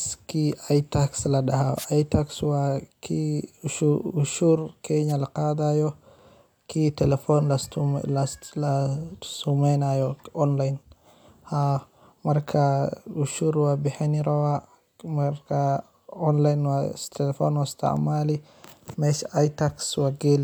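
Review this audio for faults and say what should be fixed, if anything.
Two wireless microphone noise hits, at 1.76–1.86 s and 5.08–5.13 s: the FM radio link fades as reflections cancel, so receiver noise surges as a swish of static. Each shows as a broadband smear on a spectrogram and a fuzzy burst in the waveform. Diversity receivers or better antenna placement would prevent this.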